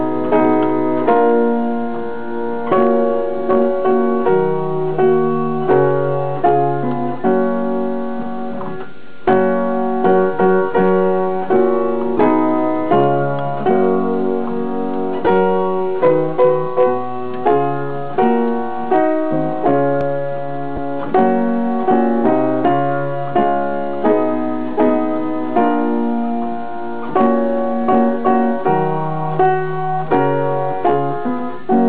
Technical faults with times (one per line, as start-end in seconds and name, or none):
12.18 lost LE Audio frames
15.25-15.27 lost LE Audio frames
20.01-20.03 loud pop
20.76 lost LE Audio frames